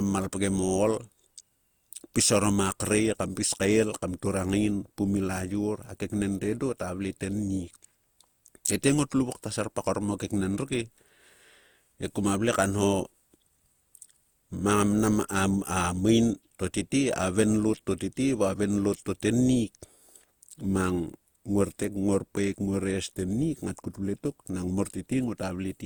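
Right through the speech there's a swirly, hollow smear with blurred attacks, most likely generation loss from several Opus passes (about four), each around 64 kbit/s.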